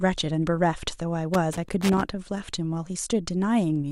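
From 1.34 to 2.01 s the speech breaks into an irregular burst of scratchy crackle. This is loose connector crackle: a worn or dirty contact keeps making and losing connection as it shifts, chopping the signal into fragments, while any DC on the line adds sharp pops.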